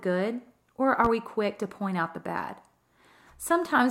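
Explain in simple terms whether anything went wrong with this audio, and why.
A loud pop at 1.05 to 1.08 s, just before "we quick to point": a sudden electrical jolt, likely from a plug or switch, lands on top of the speech.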